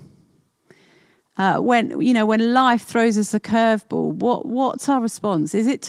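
No faults are audible; the speech comes through Opus compression with full-band content and only light coding texture.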